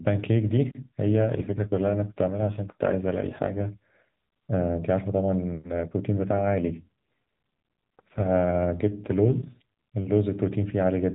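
AMR rate drops at 1.14–3.70 s and 6.16–9.62 s: the narrowband speech keeps its band and never gaps, but turns rougher and more synthetic. The sound fits the codec falling from 12.2 to 5.9 kbps, spending bits on error protection, then recovering.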